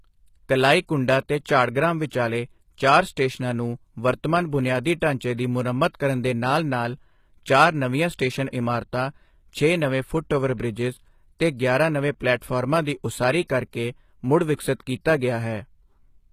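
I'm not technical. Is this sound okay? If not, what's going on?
No, there are two problems. Throughout the recording, the voice's upper range sounds gritty and metallic, with s sounds coming out lispy. This is likely HE-AAC compression, which keeps the lower part properly and fakes the treble by copying lower bands upward.

There's also a brief pre-echo from about 14.55 to 14.59 s. For around 35 ms, a short hiss arrives just ahead of a sharp sound, softening its start. The compression spreads its noise over a short stretch, so some lands before the attack.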